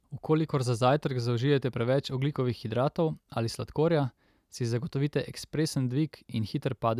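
Nothing goes wrong anywhere in this bit of speech, so there's no technical fault to point to.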